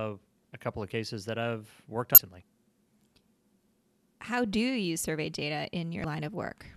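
Speech with two short bursts of damaged data in a compressed stream, at 2.15 to 2.18 s and 6.01 to 6.05 s. Each lasts about 35 ms. Corrupted bytes make the decoder misread frames and lose sync until it finds the next valid frame header.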